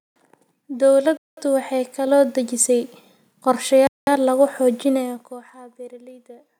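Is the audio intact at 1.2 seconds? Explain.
No, the speech is interrupted there by a gap between chunks, running from 1.17 to 1.37 s. The audio was delivered in pieces, here consistent with 2.5-second chunks, and 200 ms of silence was left at a join rather than the next piece following on directly. It is heard as an abrupt hole with hard edges. On a waveform it shows as a sudden flat line, and on a spectrogram as a blank vertical band with sharp boundaries.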